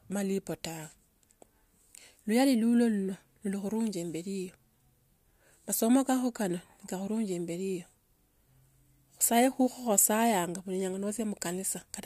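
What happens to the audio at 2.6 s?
Nothing goes wrong at 2.6 s: the speech carries on intact through that moment, with no dropout, click or other fault to be heard.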